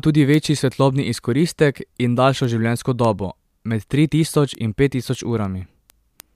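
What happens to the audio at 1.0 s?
At 1.0 s the speech carries word clock ticks, which run from 0.19 s to 6.35 s. An unlocked receiver clock drops or repeats a single sample about seven times a second, pointing to a mismatch of roughly 150 ppm. The result is sharp, evenly spaced clicks that show as thin broadband vertical lines on a spectrogram and tiny one-sample steps in the waveform.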